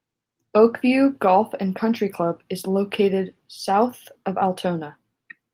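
No technical faults can be heard anywhere in the recording. The speech comes through with nothing in the sound that points to a problem at any point.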